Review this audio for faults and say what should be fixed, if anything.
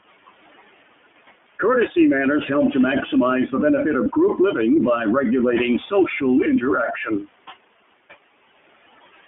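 Noise suppressor artifacts run through the whole recording. The suppressor pulls steady noise down by about 19 dB frame by frame, so the room noise, sitting about 14 dB under the speech, drops away in pauses and surfaces beneath syllables. Unlike codec roughness, this pumping follows the gaps between phrases. Gentler suppression depth and slower gain smoothing would prevent it.

iLBC codec coding is plainly audible throughout. The band is limited to roughly 200 Hz to 3.4 kHz, and each frame's excitation is coded on its own, which fits the 20 ms, 15.2 kbps mode. That gives the speech a slightly rough, synthetic edge. It differs from suppressor warble because the graininess stays constant rather than swelling in pauses. A wideband codec would prevent it.

Lost iLBC frames briefly interrupt the audio at 4.04 to 4.07 s, between "to maximize the benefits" and "group living by regulating". About 20 ms of signal was concealed by repeating the last pitch cycle with added noise, so it sounds like a short buzzy held vowel. 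A dropout would leave silence instead, and recovery here is immediate because frames stand alone. Jitter buffering or redundancy would prevent it.

Speech cut by the noise suppressor occurs from 6.87 to 7.28 s, with around a fifth of a second affected in total. Quiet speech was mistaken for noise and turned down by as much as about 18 dB, so parts sound swallowed. It differs from artifact warble because speech itself fades, not background. A voice-activity guard on the suppressor would prevent it.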